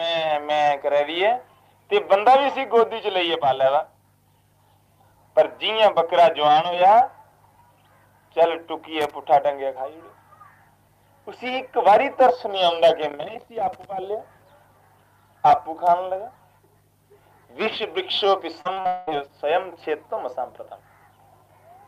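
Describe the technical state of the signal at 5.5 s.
At 5.5 s the signal is intact, with no dropout, distortion or other fault audible at that point.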